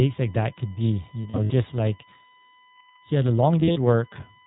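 A steady USB whine sits under the speech for the whole clip, a fixed tone at 1 kHz about 30 dB below the speech. It comes from the USB bus drawing current in 1 ms frames, and that periodic load leaking into the audio through the power or ground. The result is a thin, constant pitched tone that stays put regardless of what is being said.

The speech is also carried through the iLBC codec, and its damage is plainly audible. iLBC is narrowband, so nothing above 4 kHz survives, leaving the speech dull and band-limited. Each frame's excitation is coded on its own, which gives the speech a slightly rough, synthetic texture. The 20 ms frame timing and overall character fit the 15.2 kbps mode.

Two bursts of lost iLBC frames follow. The first comes right after "like that could be", from 1.22 to 1.52 s. About 140 ms of audio is missing, scattered over 280 ms in runs of up to about 70 ms, which fits seven lost 20 ms frames. 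The second comes after "he had a", from 3.60 to 3.77 s, with 100 ms missing over 160 ms and runs of up to about 40 ms. In each gap the decoder repeats the last pitch cycle mixed with noise, so the speech turns into a held, buzzy or breathy vowel. Because iLBC frames stand alone, clean decoding resumes almost immediately once packets arrive again.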